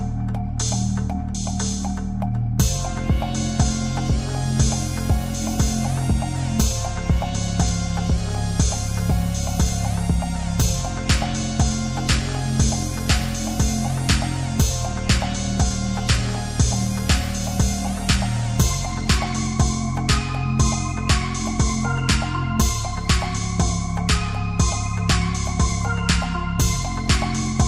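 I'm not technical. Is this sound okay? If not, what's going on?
Yes, it sounds fine.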